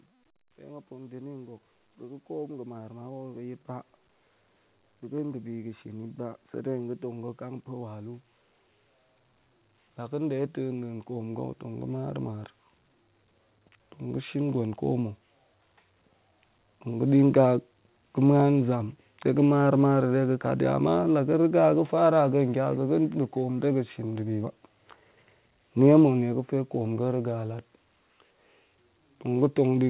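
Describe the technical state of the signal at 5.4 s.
At 5.4 s, automatic gain rising is under way: the gain control judged the input too quiet and is lifting its level by about 8 dB between 4.87 and 8.28 s, so the speech and the background swell up together.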